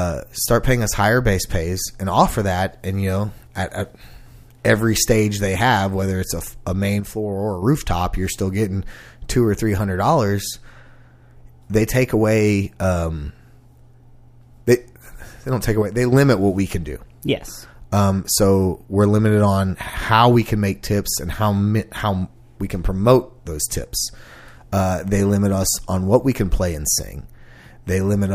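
A likely cause is one stereo channel briefly dropping out, which, once the clip is folded to mono, leaves only half the signal. The speech drops abruptly by about 6 dB from 7.00 to 7.62 s and again from 15.82 to 16.12 s, sounding suddenly quieter but otherwise unchanged before snapping back to full level.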